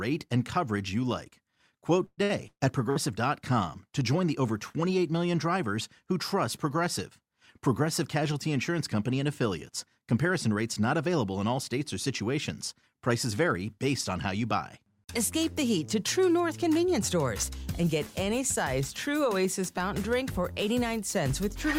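From 2.05 s to 2.98 s there is repeated packet loss, producing a robotic sound. The audio breaks up into what sounds like four separate holes, the longest about 127 ms. Each is bridged by stretching the preceding sound, so about 39% of the stretch is concealment, heard as choppy stuttering.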